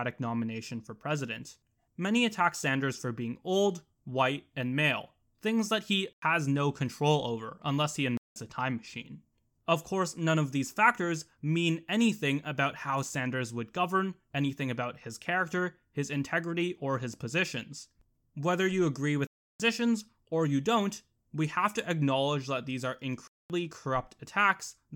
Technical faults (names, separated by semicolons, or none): block of digital silence